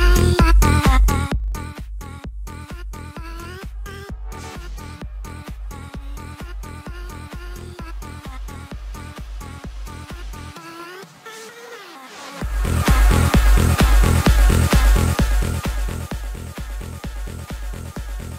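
Zipper noise runs from 0.96 to 1.8 s and again from 14.88 to 16.36 s. The level falls in unsmoothed steps, roughly 30 a second. Each step clicks, making a fast ticking.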